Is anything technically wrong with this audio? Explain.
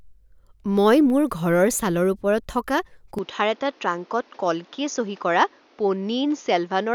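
Yes. At 3.19 s the sound abruptly turns duller and quieter until the end. Nothing remains above 6.8 kHz, with new background noise. The input likely switched to a poorer device.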